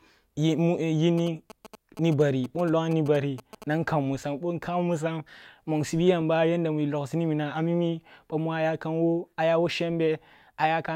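GSM signalling bursts run from 1.18 to 3.64 s, ending just before "nan kammusam". A nearby 2G phone, exchanging short bursts of signalling with its network rather than carrying a call, radiates pulsed radio energy that the audio circuitry picks up and rectifies into sound. The result is a galloping dit-dit-dit of brief buzzes repeating at about 217 Hz, sitting about 15 dB below the level of the speech.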